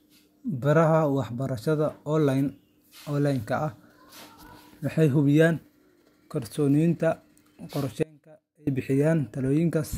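The signal feeding the chain was likely lost for about 0.64 s while the path after the break stayed live, an audio dropout to a faint residue from 8.03 to 8.67 s. The speech cuts out abruptly mid-flow rather than pausing or fading, and the gap is not silent: a faint leak of the sound remains, roughly 30 dB below normal level, before the speech snaps back at full strength.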